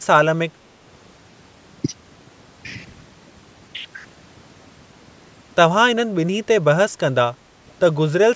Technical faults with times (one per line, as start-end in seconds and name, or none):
0.00-8.35 overdone noise removal
0.00-0.04 speech suppressed in double talk
7.46-7.54 speech suppressed in double talk